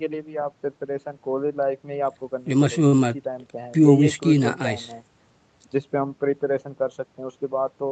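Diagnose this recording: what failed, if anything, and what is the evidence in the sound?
A short stall from a late packet, at the network and jitter-buffer stage, occurs at 2.87–2.94 s. The buffer ran empty, so the receiver stretched the last sound by 50 ms, then resumed. A spectrogram shows flat, smeared harmonics under the codec's 8 kHz ceiling; the waveform repeats slightly.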